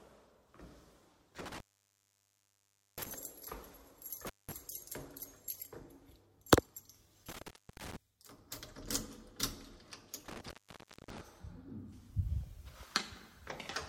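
A loose cable or plug keeps breaking the signal path, an intermittent contact fault: dropouts at 1.39 to 3.14 s (open about 1.38 s), 4.26 to 4.52 s (0.19 s), 7.29 to 7.96 s (0.29 s) and 10.28 to 11.21 s (0.59 s). Each cuts the sound with crackle at its edges, leaving faint hiss.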